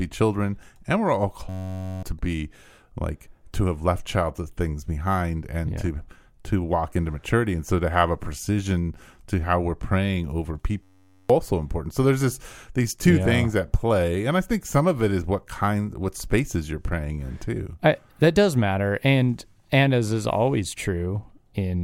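Speech clip with two system hang loops: about 1.49 to 2.03 s, after "children and we're", and 10.83 to 11.30 s, after "how we're praying over". Each time a 10.67 ms slice repeats as a steady 93.8 Hz buzz, roughly half a second of audio lost, which fits a 512-sample buffer cycling while the system froze.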